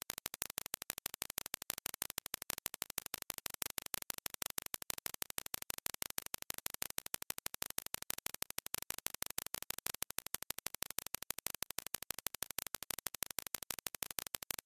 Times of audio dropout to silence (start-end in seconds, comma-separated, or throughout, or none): none